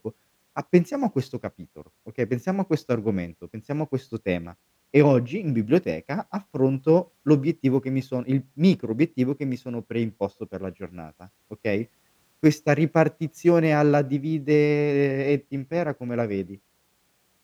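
No technical faults can be heard anywhere in this recording.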